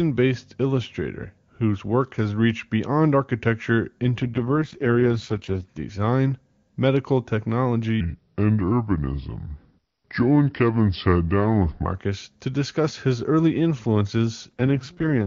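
Speech carried over AMR wideband, whose clean sections sound like the top rate, suffers two AMR rate drops. The first runs from 4.22 to 5.67 s, between "has reached beyond architecture" and "design medical". The second starts at 14.49 s after "early influences" and lasts to the end. In both the voice turns rough and buzzy without any gap or loss of bandwidth, which fits a fall from 23.85 to 6.6 kbit/s. On a spectrogram the band edge stays put, but harmonics smear. The waveform stays continuous. From 8.01 to 11.85 s a section plays at the wrong speed, 0.778 times normal, dropping pitch by about four semitones and drawing the voice out slow and deep. The likely cause is a resampling or clock mismatch during editing or playback. A spectrogram shows harmonics packed closer together and formants shifted down, and the waveform shows stretched syllables.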